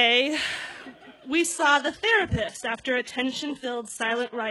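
At 1.40 s the audio switches abruptly, with no gap, to an adaptive stream at a lower bitrate and stays there to the end. The player has evidently stepped down to a cheaper rendition after the connection slowed. Nothing remains above 11.5 kHz, the upper band takes on a synthetic, reconstructed quality, and coding artefacts rise. This fits a drop from a 96 kbit/s AAC stream to a 12 kbit/s HE-AAC one.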